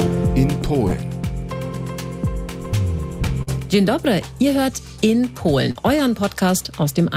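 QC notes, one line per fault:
0.87–0.94 s, 3.43–3.50 s and 5.71–5.78 s: short concealed packet loss. Each spot is a brief smear or wobble lasting a few hundredths of a second, where the sound seems to hang on itself before blending back. About 40 ms of audio arrived too late to decode each time, so the receiver bridged the gap by extending the preceding sound for roughly 33 to 42 ms and then cross-faded into the real signal.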